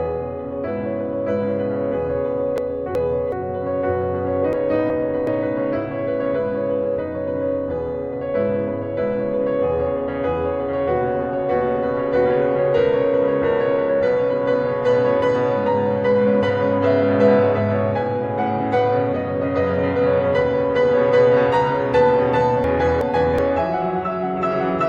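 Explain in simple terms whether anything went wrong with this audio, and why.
Yes, something went wrong: three short stretches of this music have frames out of order, at 2.58 to 3.32 s, 4.53 to 5.27 s and 22.64 to 23.39 s. In each, two neighbouring pieces of about 0.37 s play back swapped, so the music stutters in a garbled flutter. Unlike a dropout or skip, nothing is missing; the same sound is there, just briefly in the wrong order.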